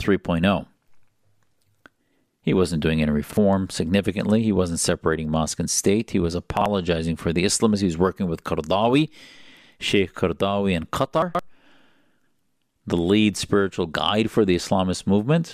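Chunks out of order at 3.24–3.37, 6.57–6.66 and 11.22–11.39 s: a roughly 43 ms block plays late, so the speech jumbles briefly.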